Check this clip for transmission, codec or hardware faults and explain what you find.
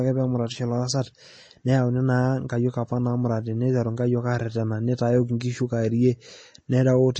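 There's one problem, and it runs through the whole clip: likely MP3 compression at a low bitrate, maybe around 32 kbps. Nothing comes through above 8.3 kHz, and the speech sounds watery and swirly as weak frequency lines drop in and out.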